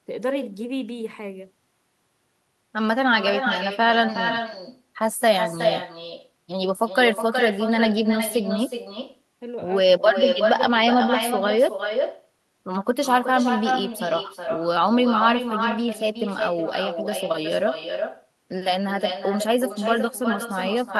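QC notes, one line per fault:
throughout, echo with no canceller: the far end plays the call through a loudspeaker, its microphone picks it up, and nothing removes it, so the talker's speech comes back roughly 400 ms later as a thinner copy about 6 dB quieter.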